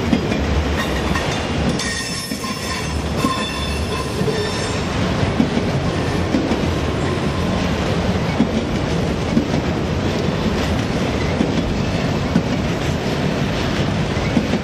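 No technical faults can be heard anywhere in the audio.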